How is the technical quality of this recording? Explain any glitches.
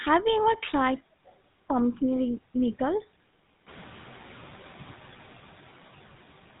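The technical quality is limited by plainly audible codec coloration throughout and a brief noise-suppression lag in the middle of the clip.

GSM full-rate codec: Throughout, the speech has a buzzy, gravelly roughness and nothing above 3.8 kHz. This comes from pulse-excited vocal-tract modelling, which fits a 13 kbps full-rate coder.

Noise suppressor catching up: The room noise steps up around 3.5 s. From 3.66 to 4.2 s it passes with little reduction at first, then sinks by about 5 dB over those 540 ms as the suppressor's noise estimate adapts.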